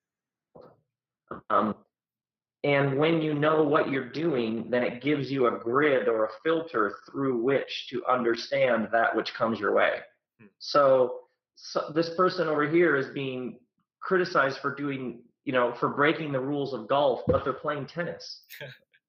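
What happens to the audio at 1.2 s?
Nothing goes wrong at 1.2 s; the audio plays through that moment intact, with no dropout, click, glitch or other fault to be heard.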